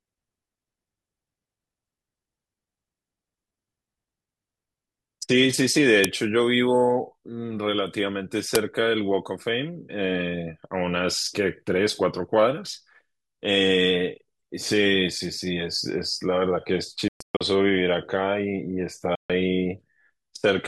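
A speech clip with two uninitialised buffer bursts, at 6.04 s and 8.55 s: brief blasts of loud digital noise where stale memory played as audio, fitting 128- and 256-sample blocks. Later, the sound cuts to silence from 17.08 to 17.41 s in broken gaps (longest about 122 ms), then again from 19.15 to 19.30 s, resuming as if it had continued, likely a Bluetooth dropout.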